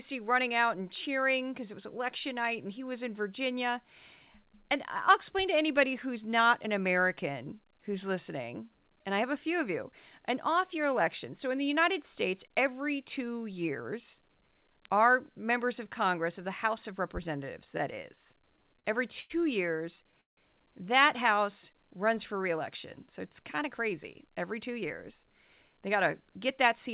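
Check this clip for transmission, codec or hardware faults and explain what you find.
Three faults are audible in this speech, carried over a narrowband call path whose sound stops at 4 kHz.

At 14.85 s, just before "our members of", there is an electrical switching spike: a sharp snap laid over the speech, likely from a nearby switch or discharge arcing into the line. Unlike a dropout click, nothing is lost underneath it.

Repeated stalls (stutter) run from 17.64 to 19.32 s and again from 19.96 to 20.39 s. Late packets drained the jitter buffer over and over, so the receiver stretched the last sound to fill each wait. The first stretch has about fourteen short hitches of up to 94 ms. The second has four, one lasting 165 ms and fading. No speech goes missing, which separates this from packet loss: the speech drags rather than skipping.

A jitter buffer speed-up starts after "it's kind" at 23.69 s and lasts to the end. 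To shed surplus buffered delay, the receiver trimmed pitch-period slices, cutting roughly a fifth of a second. The speech runs about 6% faster at unchanged pitch and sounds hurried, unlike a resampling error, which would also raise the pitch.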